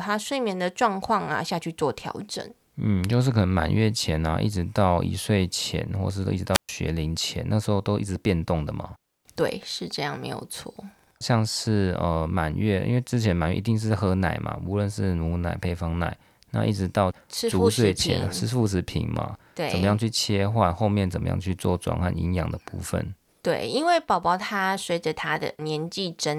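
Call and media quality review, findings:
Brief burst of hiss at 6.53 s, then near-silent hole of about 127 ms, speech back by 6.69 s. Probable component: analogue FM wireless mic link. Wireless microphone squelch dropout: RF signal fades, receiver squelch mutes output until carrier recovers. Check antenna placement, line of sight, range.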